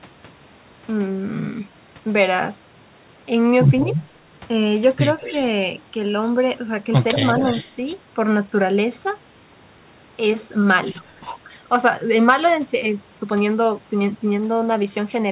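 Speech with an echo leak at 5.19–5.42, 7.35–7.71 and 11.04–11.28 s. A faint copy trails 187 ms behind, roughly 15 dB down and even quieter at 11.04 s, likely from a loudspeaker return the far side's echo canceller missed. On a spectrogram it shows as a weaker duplicate of the speech pattern shifted slightly right.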